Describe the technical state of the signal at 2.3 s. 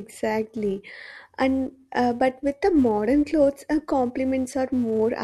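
At 2.3 s the speech carries a filter restarted on every block, present throughout the clip: the filter drops its state and starts each block from silence, leaving a tick every block. These form a 345 Hz buzz, which fits a 128-sample block. Unlike mains hum, it rises and falls with the speech level.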